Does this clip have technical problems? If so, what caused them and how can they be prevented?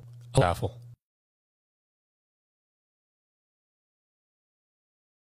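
Yes. From 0.38 to 0.43 s there is a short glitch caused by damaged data in the compressed stream. Part of the encoded file there is corrupt, so the decoder misreads those frames, loses sync and has to hunt for the next valid frame header before clean sound resumes. Prevent it by verifying transfers with checksums and keeping non-audio data out of the stream.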